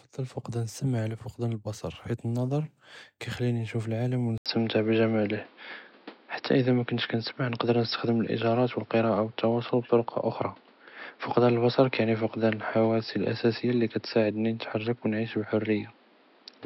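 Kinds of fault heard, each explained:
Input switched to a poorer device: at 4.38 s the speech drops out for 80 ms, then returns duller and boxier, cut off above 5.5 kHz, shifted in level by around 5 dB, over new background noise; likely the recording moved to a narrower-band microphone.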